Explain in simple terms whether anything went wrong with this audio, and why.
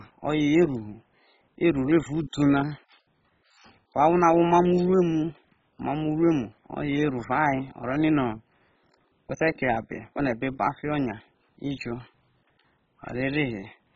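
The speech sounds dull and gurgly from start to finish, with nothing above 7.5 kHz, likely heavy MP2 compression switching off the upper frequency bands.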